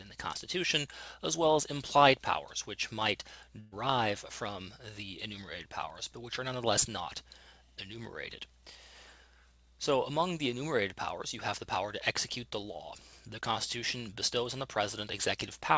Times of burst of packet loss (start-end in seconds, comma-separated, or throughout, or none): 3.60-3.74